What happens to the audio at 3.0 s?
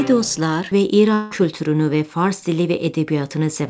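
Nothing goes wrong at 3.0 s: the audio passes through intact, with only the steady band limit of the call path, which leaves nothing above 8 kHz.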